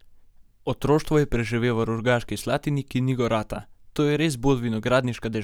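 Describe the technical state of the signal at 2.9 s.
At 2.9 s the speech signal is intact, with no dropout, clipping, distortion or other fault audible at that moment.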